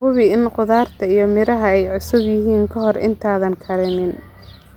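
No technical fault can be heard anywhere in the speech recording. There is nothing to mark at any point in the audio.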